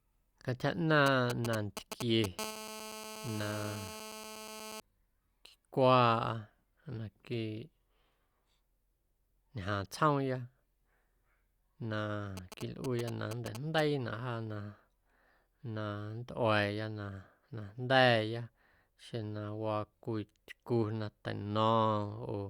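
A nearby 2G phone sending GSM signalling bursts is picked up and rectified by the audio circuit in this speech recording, giving a galloping dit-dit-dit of short 217 Hz buzzes from 1.06 to 2.26 s, nearly as loud as the speech, and again more quietly from 12.37 to 13.80 s. A phone then holding a call transmits continuously at 217 bursts per second, producing a steady GSM phone buzz, hard and raspy with many harmonics, at about 12 dB below the speech from 2.39 to 4.80 s.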